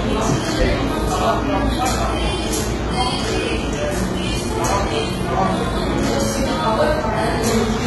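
From start to finish the top end stops dead around 11.8 kHz, and what sits below it sounds bright but fake: gritty, metallic highs that don't match the body of the sound. That's likely heavy HE-AAC compression, with the treble rebuilt from copied lower bands, which fits a very low bitrate of around 16 kbps.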